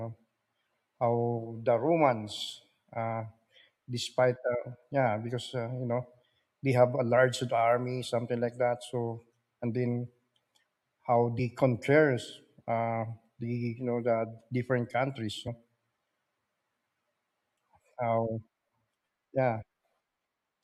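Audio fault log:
11.38 s: damaged data in a compressed stream. A brief glitch just before "compares uh the", as the decoder misreads corrupted frames, loses sync and skips ahead to the next header.
15.47 s: damaged data in a compressed stream. A short blip right after "different countries", where corrupted frames throw the decoder off sync until it finds the next valid frame.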